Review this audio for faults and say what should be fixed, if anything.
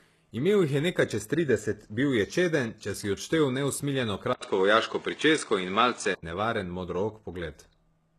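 Low-bitrate audio saved at a high bitrate: the speech stops dead above 12.3 kHz throughout. Smeared artefacts remain. This is likely from a very low-bitrate first encoding. Keep the original source and encode once.

Input switched to a poorer device: after "če si odštel neusmiljeno", an 80 ms silence occurs. From 4.33 to 6.23 s, the band ends at 9.2 kHz. The level shifts a few decibels and faint new background noise appears. This is likely a switch to another microphone. Lock the input device before recording.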